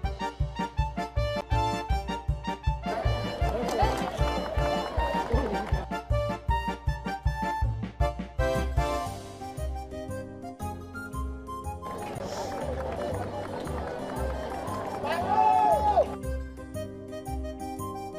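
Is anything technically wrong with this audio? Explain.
Yes. There are two CD skips, at 1.41 s and 12.19 s. A knock or a flaw on the disc made the laser jump to another turn of the spiral track. The player muted briefly, about 10 ms the first time and about 15 ms the second, and then resumed from a different point on the disc. Each is heard as a short tick or gap, followed by an abrupt jump in the audio to another place in the recording.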